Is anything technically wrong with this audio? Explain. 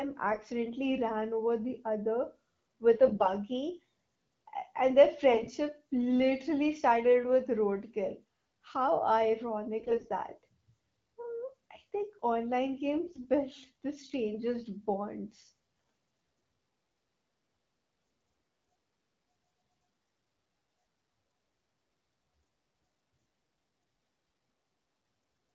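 Yes. AMR bit errors hit at 0.31–0.50 s (before "ran over the"), 3.06–3.31 s (after "with a"), 5.32–5.47 s (before "literally started with roadkill"), 9.80–10.09, 13.06–13.27 and 20.03–20.27 s. Flipped low-priority bits misplace excitation pulses and corrupt fine pitch, gain and spectral values, so speech keeps its pitch and level but turns hoarse, scratchy and gargly, worst near 13.1 s.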